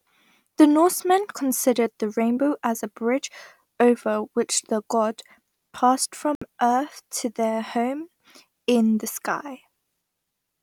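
The receiver lost its digital lock or rejected corrupted frames, muting until clean data resumed: a digital broadcast dropout. Just after "which the god passed", the speech cuts to silence from 6.35 to 6.42 s. The roughly 64 ms gap suggests two lost frames.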